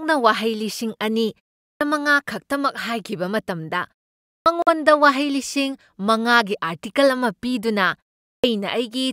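Clipped start after a pause at 1.74 s and 4.40 s: after silences of 0.42 s and 0.55 s the output device had dozed off, so about 67 ms and 59 ms of speech onset vanish and each phrase begins abruptly. A Bluetooth dropout follows at 4.62 to 4.68 s, a 46 ms hole, likely from late packets (the gap fits two lost frames); speech resumes as if it had kept running. The clipped start returns at 8.37 s, where a 0.43 s pause costs roughly 67 ms of the next onset.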